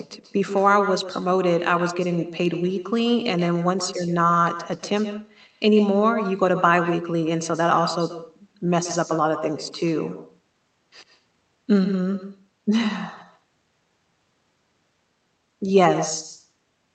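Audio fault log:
Throughout: echo with no canceller. The talker's speech returns roughly 150 ms later as a quieter, thinner copy about 10 dB down, because the far end's loudspeaker feeds its microphone and nothing subtracts that before it travels back.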